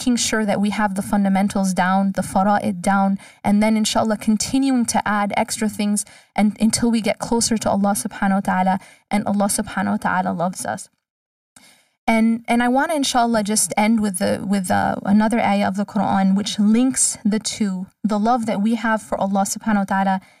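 From start to finish the audio carries channel delay with comb filtering. One channel arrives roughly a millisecond and a half behind the other, and when the two are folded to mono, content common to both cancels at regularly spaced frequencies. The first notch falls somewhere around 400 Hz, with further notches repeating evenly up the spectrum. Because the offset never changes, the notches stay fixed, leaving the sound hollow and phasey throughout.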